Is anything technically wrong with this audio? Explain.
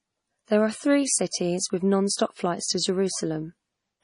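Yes. Throughout, the speech carries heavy damage that is likely MP3 compression: nothing remains above 10.6 kHz, and starved weak frequency lines flicker between frames, giving a watery, swirly texture with metallic chirps on s sounds, which fits a very low bitrate near 32 kbps.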